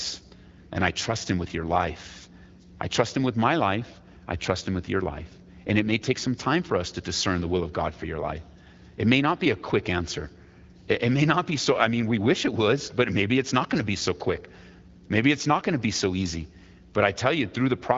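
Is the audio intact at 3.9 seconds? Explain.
Yes, the audio is intact at 3.9 s, with no fault at that moment.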